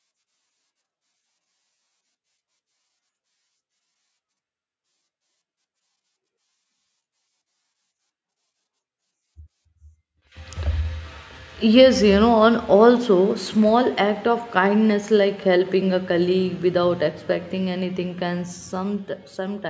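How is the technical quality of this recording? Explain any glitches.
No glitches; this speech recording has no audible faults.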